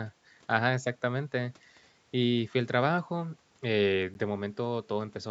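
At 4.14 s the speech drops to silence for about 11 ms, then carries on. This is a Bluetooth stall, likely from interference delaying packets. The headphone buffer ran empty, so playback paused briefly until the resent data arrived.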